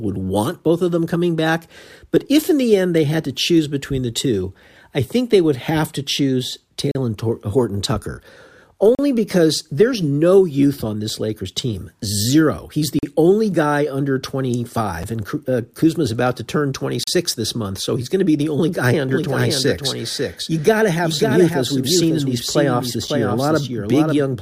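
It's a speech clip with two separate problems. First there are gaps between stream segments: hard-edged silent holes at 6.91 s (right after "would have to choose"), 8.95 s, 12.99 s, 15.03 s and 17.04 s (between "about to turn" and "this month so he's"). Most last about 38 to 42 ms, and the one at 15.03 s is only about 6 ms. They land on a 2-second rhythm, which fits segment timestamps that don't quite butt up, so the player pads the join with silence rather than dropping anything. Then from 19.09 s, just after "be the only guy", a doubled audio track comes in and runs to the end. A full-band copy of the speech trails the original by roughly half a second, at about 5 dB down, with no reverb tail or room colour. It most likely comes from the same audio being captured a second time over a slower path and mixed back in.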